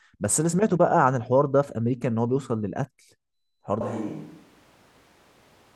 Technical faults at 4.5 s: switch to a distant microphone

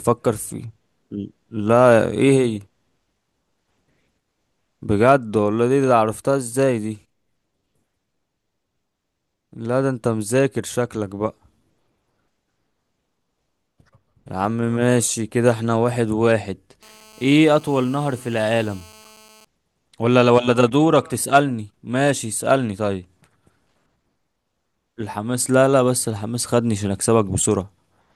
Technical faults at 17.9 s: GSM phone buzz

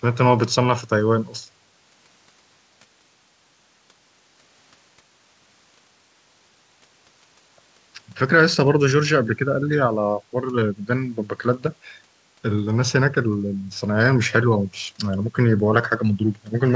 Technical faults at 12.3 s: none

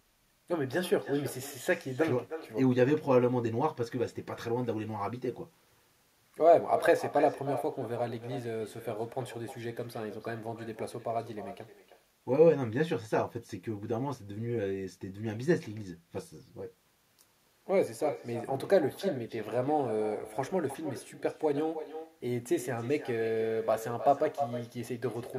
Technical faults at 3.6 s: echo with no canceller

